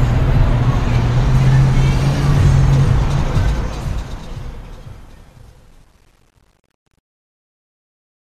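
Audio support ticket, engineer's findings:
Truncation distortion on fade-out, 3.35 s to 8.37 s, worst from 4.58 s to 8.38 s. Tail turns gritty. Fade/gain stage requantising to 9 bits without dither; waveform collapsing to coarse square steps as level nears smallest step.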